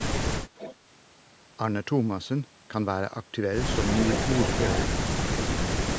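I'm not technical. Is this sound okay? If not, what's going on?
No. There is an echo leak at 0.56 to 0.75 s and again from 3.87 to 4.86 s: a fainter copy of the speech returns about 285 ms late. A distinct delayed repeat like this, rather than a roomy blur, likely means a loudspeaker's sound was not fully cancelled.

Right after, from 4.88 to 5.27 s, comes speech suppressed in double talk. For roughly 0.4 s the talker's voice sinks sharply, likely because the echo canceller turned everything down.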